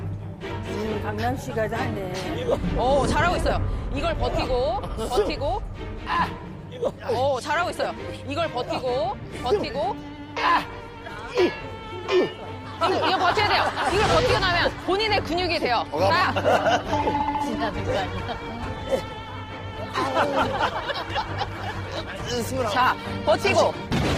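From 16.28 s to the end, the adaptive stream switched to a lower-bitrate version, which fits a step down from 64 to 16 kbit/s Opus. The quality changes suddenly and codec artefacts rise, with no gap in the sound.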